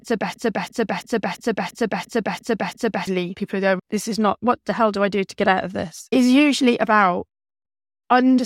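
Right after "it's a", at 0.34 s, the speech hits a system hang loop that runs until 3.07 s. The machine stalled while the sound hardware kept replaying one ring buffer, so a single 341 ms slice repeats exactly eight times at about 2.9 Hz. That slice length fits a 16384-sample buffer. It comes across as a stuttering, stuck-record chop, and roughly three seconds of real audio are gone before "people go" picks back up.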